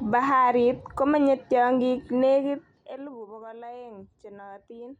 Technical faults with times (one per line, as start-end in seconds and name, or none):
none